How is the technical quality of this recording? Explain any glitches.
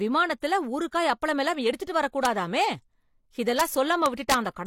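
The recording has integer overflow at three points. Brief cracks occur at 2.25 s and 3.6 s, where the signal overshoots the integer limit by about 1 dB. From 4.06 to 4.34 s there is a longer stretch, overshooting by about 3 dB. A sum or gain exceeded the largest representable value and wrapped to the opposite sign instead of being limited. Clipping flattens peaks. Overflow flips them across the full range, so it sounds like cracks rather than a dulled, squared-off distortion.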